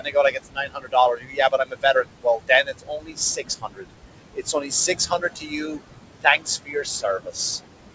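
Throughout, the background sinks away between phrases and surfaces under them: noise suppressor artifacts, the suppressor pulling noise-judged bands down by about 21 dB frame by frame. Speech is cut by the noise suppressor at 0.0–0.95 s, 1.16–3.18 s, 3.36–3.85 s, 4.35–4.71 s, 4.88–5.8 s, 6.22–6.47 s and 6.65–7.37 s, where soft consonants and endings sound swallowed, dipping by about 16 to 21 dB.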